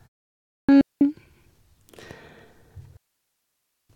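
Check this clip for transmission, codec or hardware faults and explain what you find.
Two kinds of fault turn up here: a clipped start after a pause near the beginning, and two digital wireless dropouts later on.

The clipped start after a pause runs from 0.33 to 0.69 s. After the opening 0.33 s of silence, the output device, asleep during that gap, needs about 356 ms to wake and lock, so speech bursts in abruptly without its first sounds. This one eats actual speech.

The digital wireless dropouts fall at 0.81 to 1.01 s (201 ms) and 2.97 to 3.90 s (927 ms). The receiver, losing too much data from the link, mutes behind a very short fade, leaving clean holes of near silence. No noise bursts or crackle surround them, which separates them from analogue interference or packet glitches.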